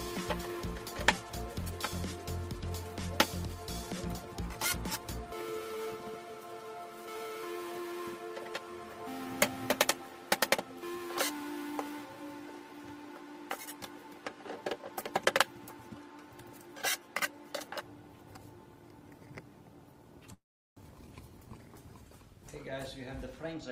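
From 20.33 to 20.79 s the audio stalls in a call audio freeze. The last sound is carried on as a fading buzz for a moment and then drops to silence for about 380 ms, with roughly 432 ms of time added before the sound resumes exactly where it left off, nothing lost. On a waveform this looks like a short decaying tail followed by a flat line; a spectrogram shows smeared, tonal continuation bands dissolving into an empty column. The likely cause is packets held up in transit until the jitter buffer ran dry. Shortly after, at 21.07 to 21.09 s, there is a skip ahead: about 150 ms of audio vanishes and the two sides are butted together with only a tiny 6 ms bridge, so the sound lurches forward rather than pausing. On a spectrogram the harmonic contours jump abruptly at a vertical seam with no gap, and the waveform shows a sudden change in envelope where the splice sits, consistent with late-arriving audio being discarded because newer audio was already queued. 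Finally, from 23.43 s to the end, a jitter buffer speed-up runs the audio at about 117% of normal speed while the pitch stays put. Around 50 ms in total is trimmed away in many small pitch-period-sized cuts, which makes the sound feel hurried. A spectrogram shows events compressed in time but harmonics at unchanged frequencies, and the waveform shows periodic cycles occasionally missing, as the receiver drains excess buffered delay.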